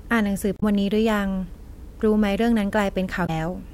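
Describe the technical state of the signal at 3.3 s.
Damaged data in a compressed stream runs from 3.23 to 3.30 s: corrupted frames throw the decoder out of sync until it finds the next header, leaving a brief chirp or blip in the speech.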